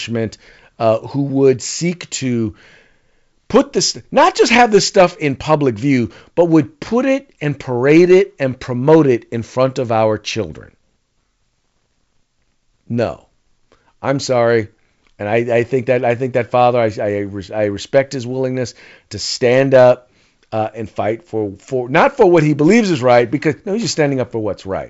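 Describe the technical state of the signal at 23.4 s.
At 23.4 s the speech is intact, carried by G.722 wideband telephone coding at 64 kbit/s with nothing above about 7.7 kHz and no fault to be heard.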